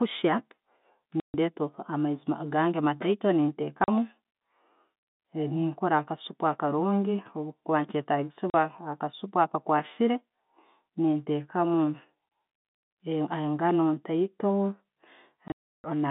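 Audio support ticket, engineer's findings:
Packet loss filled with silence: dropouts at 1.20–1.34 s (just before "amaizi gange"), 3.84–3.88 s, 8.50–8.54 s, and a scattered cluster at 15.48–15.84 s with a longest run of 0.32 s. Gap lengths fit 20 ms packets. Receiver inserts zeros, so the waveform shows flat runs with abrupt edges, and the spectrogram shows blank vertical bands.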